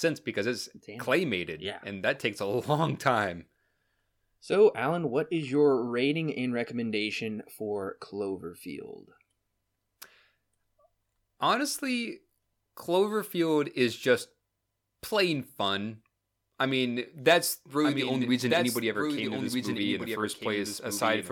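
A speech clip with a doubled audio track from 17.84 s to the end. After "fun I mean that's", an abrupt, full-band, somewhat quieter copy trails about 1.5 s behind, likely from a slower second capture path. Spectrograms and waveforms show the speech pattern repeated, shifted right.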